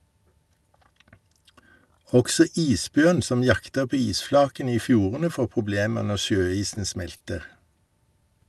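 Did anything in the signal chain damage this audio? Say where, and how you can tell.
Yes, at the network and jitter-buffer stage: three short stalls from late packets, at 6.74 to 6.78 s, 7.16 to 7.22 s and 7.86 to 7.92 s. Each time a packet arrived late, the buffer ran dry and the receiver stretched the last sound, about 20 ms at the first and 40 ms at the others, then resumed without losing anything. On a spectrogram the harmonics run flat and smeared across those spans. The waveform shows one cycle pattern repeating, with later timing pushed back.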